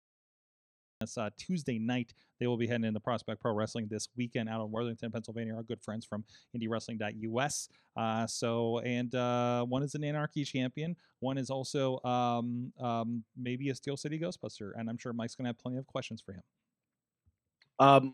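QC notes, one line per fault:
0.00–1.01 s, cut-off start: the file opens on about 1.01 s of digital silence, and the speech then begins abruptly at 1.01 s, already partway through a sound. There is no natural onset or rising attack, because capture or streaming started late and the first part of the utterance was never recorded. The silence is padding placed ahead of the late start, so the level jumps straight from nothing to mid-sound.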